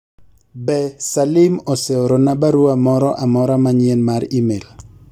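A short speech recording with no technical faults to report. Nothing in it calls for a time, a value or a cause.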